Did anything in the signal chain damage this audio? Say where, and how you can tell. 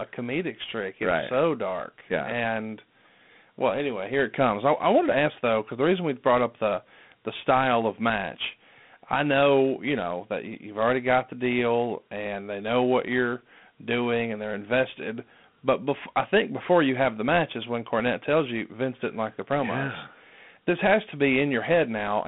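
Yes, at the codec stage, for the whole clip. This speech carries Dialogic VOX ADPCM damage, plainly audible from start to end. A gritty hiss rides on the speech and tracks its level. The band runs from about 150 Hz to 3.6 kHz, with nothing above 3.8 kHz. That points to 4-bit ADPCM at 8,000 samples a second, which fits 32 kbps. Each sample stores only a coarse step from a prediction, so the rounding error becomes that grit.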